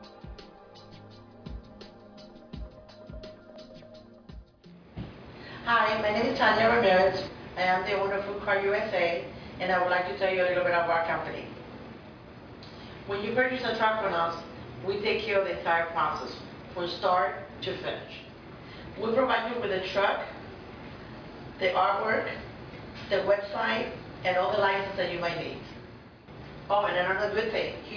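No technical faults can be heard anywhere in the audio.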